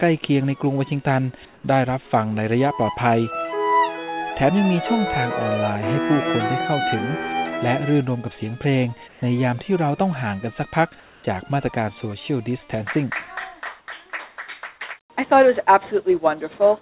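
At 1.54, 9.08, 11.0 and 13.8 s, the background briefly turns to flat, featureless hiss, a few dB quieter, for 80 to 240 ms: likely comfort noise in place of the background during discontinuous transmission.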